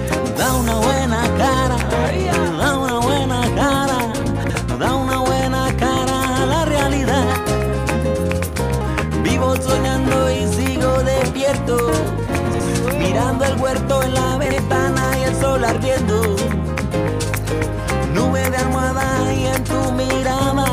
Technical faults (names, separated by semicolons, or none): chunks out of order